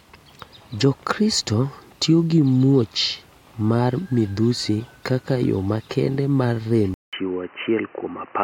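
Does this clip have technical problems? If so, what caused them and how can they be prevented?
Yes. After "yo makende mar rem", at 6.94 s, a 188 ms gap gives way to slightly quieter, boxy speech cut off above 3 kHz with faint new background noise, likely an input switched to a poorer device. Lock the recording input and disable automatic headset or device switching.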